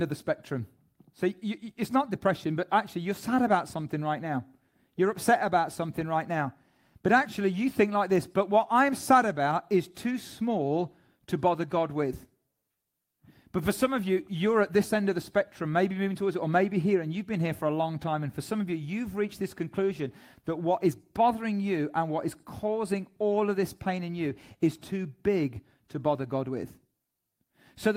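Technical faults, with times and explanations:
Nothing stood out on listening to the recording as a technical fault.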